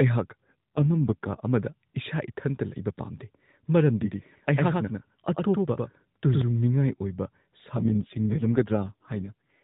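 An AMR rate drop, from roughly 12.2 to 4.75 kbps by the sound, at 0.40–1.42 s and again from 7.76 s to the end, turns the speech rougher and more synthetic.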